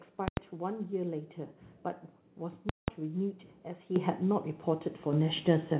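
At 3.96 s the microphone volume is stepped up. The speech and the background noise jump louder together, by about 9 dB, in a single step. At 5.13 s it happens again, by about 6 dB. Each time, the call software has judged the input too quiet and raised the device gain at once. Nothing above 4 kHz survives the call path, which fits G.711 mu-law.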